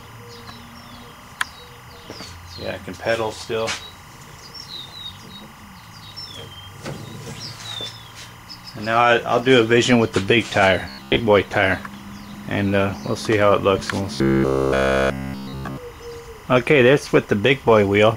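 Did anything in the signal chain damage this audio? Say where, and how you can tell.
Yes. Timecode bleed runs through the whole clip, entering at the analogue wiring. A steady chirping warble sits behind the sound, about 25 dB below it. It flips between two pitches near 1 kHz and 2 kHz, and its pattern repeats at 25 frames per second. That is linear timecode, a square wave whose two switching rates make the two tones. It has leaked from a neighbouring track or cable into this one.

Robotic sound from repeated short buffers appears at the driver or buffer stage, from 10.89 to 11.19 s and again from 14.16 to 15.77 s. The sound turns into a rigid, metallic buzz at 66.8 Hz. In the first stretch most of the audio is replaced by repeats, and in the second nearly all of it. The likely cause is audio arriving too seldom, so a slice of about 15 ms is replayed while the real audio is skipped. That repeat period sets the fixed buzz pitch.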